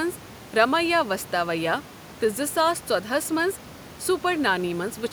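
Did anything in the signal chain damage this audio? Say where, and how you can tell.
No, nothing stood out on listening: the only thing under the speech is the room's own background noise, sitting about 19 dB and about 26 dB below it, which belongs to the recording rather than to any stage of the chain.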